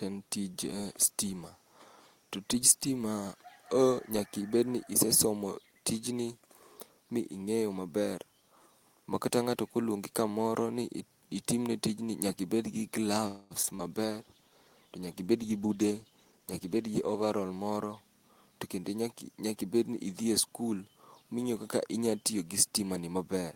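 At 13.27 s the sound stalls for about 0.23 s and trails off as a fading buzz, then resumes exactly where it stopped, likely a call audio freeze: delayed packets emptied the jitter buffer, adding a gap without losing anything. Short concealed packet loss follows at 13.63–13.65 s, 13.65–13.69 s and 13.75–13.90 s. Here 20, 20 and 40 ms of real audio never arrived and were patched with extrapolated sound, so brief smears replace content rather than merely delaying it. From 13.98 s to 17.42 s a call bitrate drop from 32 to 17 kbps makes the sound coarse and duller for over three seconds. Unlike the dropouts, this changes tone, not timing. Within that stretch, from 15.33 s to 16.99 s, a jitter buffer speed-up trims pitch-period slices, running about 14% fast at unchanged pitch and shedding roughly a fifth of a second.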